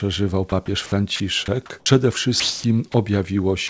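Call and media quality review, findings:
Sound dropped by the voice detector at 0.50–0.52, 0.66–0.68, 1.16–1.20, 2.40–2.64, 2.92–2.94 and 3.68 s. Sound gives way to steady comfort noise. The sender's detector likely misread it as background and stopped sending.

Onset clipped by the voice detector at 1.84–1.86 s. Sound starts abruptly, first 20 ms missing. The sender's detector was likely slow to register resumed sound, so comfort noise filled in.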